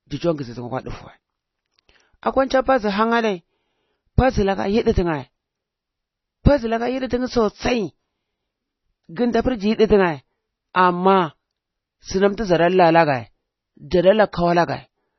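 Throughout the speech, nothing is present above about 5.9 kHz, and the remaining band sounds watery and swirly with smeared consonant onsets. This is likely MP3 compression at a very low bitrate, around 24 kbps, where the encoder discards the treble and lets weak spectral lines flicker between frames.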